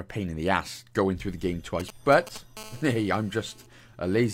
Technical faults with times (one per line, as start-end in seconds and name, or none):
1.80-2.38 GSM signalling bursts
2.57-3.66 GSM phone buzz